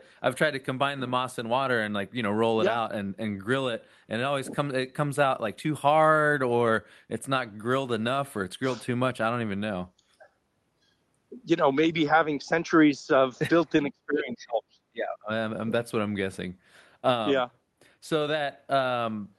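From 13.82 to 15.34 s the speech drops away, down by roughly 30 dB at its deepest, for about a second and a half. That's likely speech suppressed in double talk: the echo canceller mistook this side's talking for loudspeaker echo and turned it down.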